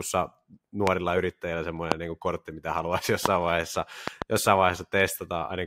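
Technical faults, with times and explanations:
0.87 to 4.24 s, loud pop: a sudden electrical step, likely from a switch, plug contact or static discharge, entered the chain at 0.87, 1.92, 3.26 and 4.08 to 4.24 s. Each produces a sharp pop roughly 20 dB above the speech, closer to 25 dB at 1.92 s, with a quick double pop at the last. The speech continues underneath.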